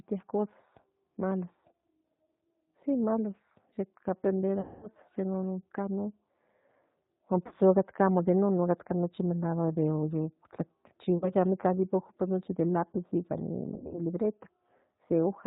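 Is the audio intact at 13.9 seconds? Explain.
No, it isn't. There's VoIP packet loss concealed by the speech codec from about 13.74 to 13.98 s. Around 100 ms went missing in gaps scattered across that stretch, the longest about 60 ms. The decoder filled them by extending the last pitch and filter at falling gain, so the sound turns into a buzzy tone or coloured noise that fades, and stays weak for a beat after the stream recovers. Underneath, the whole clip carries plainly audible G.729 codec damage. That's an 8 kbit/s coder rebuilding speech from a vocal tract filter and a few pulses per frame, so nothing above 4 kHz gets through, and the speech sounds band-limited, slightly rough and synthetic.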